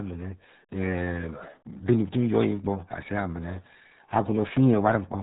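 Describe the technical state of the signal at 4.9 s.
At 4.9 s the speech carries RealAudio 14.4 codec damage, present across the whole clip. Nothing passes above about 3.8 kHz. The coarse coding, consistent with an 8 kbit/s dial-up speech codec, leaves the voice heavily muffled and gargly.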